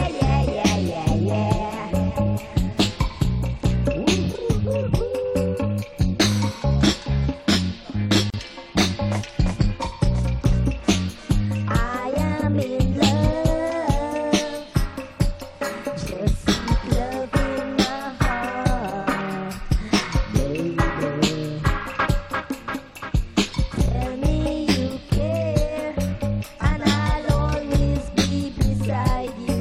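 At 8.30 s the sound drops out for about 36 ms, ending at 8.34 s, a gap at a join of encoded pieces. Separately encoded segments were butted together untrimmed, so encoder start delay and final-frame padding leave silence with smeared edges before the sound resumes unchanged.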